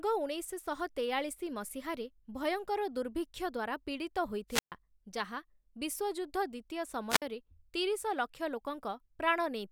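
At 4.49 to 4.72 s and again at 7.09 to 7.22 s the speech suffers a wireless microphone squelch dropout. The radio link weakens, hiss swells briefly, then the receiver's squelch shuts the output: about 131 ms of near silence in the first event, 54 ms in the second, before speech returns. That rising static ahead of the hole sets it apart from a digital packet dropout, which cuts off cleanly with no noise build-up.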